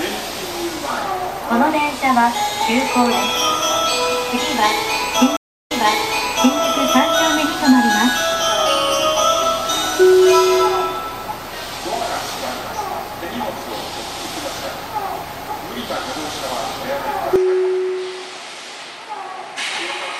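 Two problems show up in the audio. At 5.37 s there's a stream reconnect: about 0.34 s of silence, then playback picks up 0.89 s earlier than where it dropped, so a stretch repeats before things settle by 6.59 s. At 17.36 s the sound goes duller and a bit quieter through to the end, with nothing above 11.4 kHz and a new, faint noise floor, most likely because the input switched to a poorer device.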